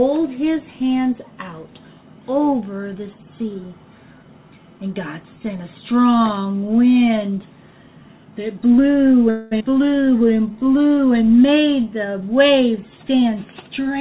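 The audio comes through a narrowband call path with nothing above 4 kHz, which fits G.711 mu-law at 64 kbps. From 9.30 to 9.53 s the last sound is drawn out as a fading buzz or hiss for about 212 ms, with no silence, and then the audio resumes where it stopped with nothing lost. This is a call audio freeze, likely caused by packets held up in transit until the jitter buffer ran dry, so the wait was padded rather than skipped. At 9.59 to 9.62 s the audio makes a skip ahead. Roughly 150 ms is dropped and the two sides are spliced almost directly, with only about 10 ms of fill. That fits the buffer discarding a late stretch to recover delay. From 10.05 to 11.00 s there is a jitter buffer slow-down. The audio plays at about 86% speed with pitch unchanged, and sounds are stretched by repeating short periods. This adds 137 ms to rebuild the buffer's reserve. From 13.14 to 13.95 s there is a jitter buffer speed-up. 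The audio runs at about 109% with pitch held and sounds hurried. Roughly 70 ms is trimmed in small pitch-period cuts to bring an overfilled buffer back toward its target delay.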